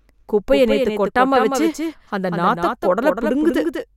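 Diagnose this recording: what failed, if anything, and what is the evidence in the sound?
A doubled audio track runs through the whole clip: every syllable of the speech returns once, roughly a fifth of a second later and a few decibels quieter, as a single clean full-band copy. Unlike acoustic echo or reverb, the repeat has no decay tail, no further repetitions and no room colouring. It is a fixed-offset duplicate. The likely cause is the signal being captured twice, with a second, slower routing path in the driver or buffer stage.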